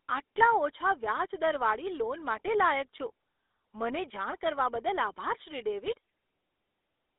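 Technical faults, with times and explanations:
Throughout, GSM full-rate codec: speech confined to roughly 300 Hz–3.6 kHz, with plainly audible buzzy, gravelly roughness from coarse pulse-excited vocal-tract modelling, consistent with 13 kbps.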